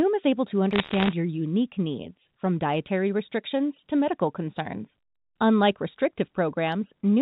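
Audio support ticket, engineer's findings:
Bit errors on the digital phone line, 0.73–1.13 s, between "is able to" and "your unique needs from". Flipped bits in the A-law samples, a rate of somewhere under one percent, each corrupting one sample. Heard as a burst of sharp ticks and crackle over intact speech, band-limited below 4 kHz.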